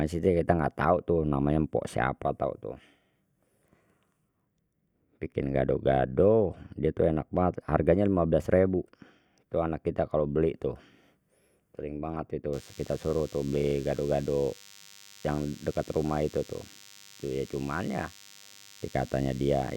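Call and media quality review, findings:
DECT cordless phone buzz from 12.53 s to 19.77 s, starting just after "sering banget tu". A thin, steady 100 Hz buzz, well below the speech. The cause is a nearby handset or base whose 10 ms radio bursts get rectified in the audio circuit. It is richer in harmonics than mains hum.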